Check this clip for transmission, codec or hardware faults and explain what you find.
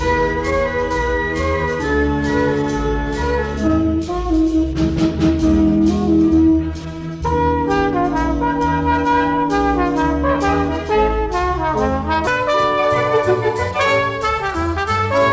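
There's one clear fault. From 0.0 to 12.27 s it's a wrong sample rate: everything runs at 0.726 speed and about 5.5 semitones low, which fits 22 kHz material played at 16 kHz.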